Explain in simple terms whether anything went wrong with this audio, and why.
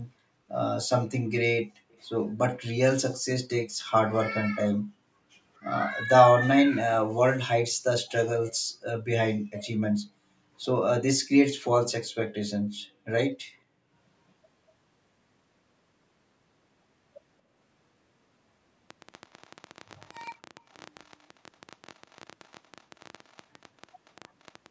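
Yes, a couple of things went wrong. First, there's an echo leak: faint copies of the speech come back about 234 ms late, at 1.9 s, 19.1–20.1 s, 20.7 s, 21.0–21.4 s, 21.9–22.3 s, 22.4–23.4 s, 23.9–24.1 s and 24.4–24.5 s. Likely the other end was on a loudspeaker and its echo canceller let some through.

Second, a train of clicks runs from about 18.9 s to the end at 24.7 s. It's roughly seventy similar ticks, around 12 a second at an uneven pace, poking out a bit above the speech, most likely from electrical interference or a faulty connection.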